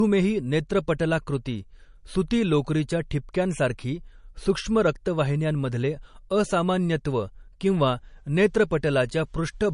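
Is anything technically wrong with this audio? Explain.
Yes. Throughout, this speech is likely low-bitrate audio saved at a high bitrate: an MP3 around 40 kbit/s re-encoded near 320 kbit/s. Nothing remains above 10.6 kHz, so it sounds dull.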